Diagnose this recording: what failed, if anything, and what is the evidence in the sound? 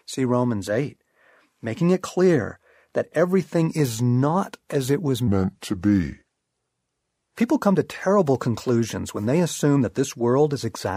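From 5.27 to 7.37 s the speech slows to 0.8x speed and drops roughly four semitones. This is a section at the wrong speed, likely from a playback clock mismatch.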